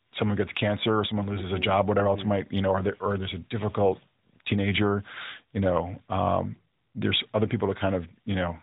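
No technical faults are audible.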